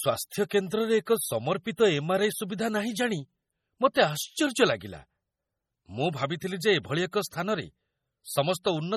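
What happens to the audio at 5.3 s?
MP3 compression artefacts are present at 5.3 s, as they are throughout the speech: the encoder likely starved for bits, which fits a rate near 32 kbps, zeroing weak frequency lines frame to frame, so the sound turns watery and swirly, with chirpy, smeared s sounds and nothing above 18.9 kHz.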